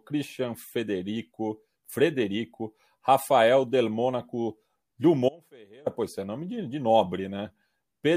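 At 5.29 s the speech cuts abruptly to a faint residue, returning at 5.86 s on "pois é nome de": an audio dropout, likely a brief signal loss.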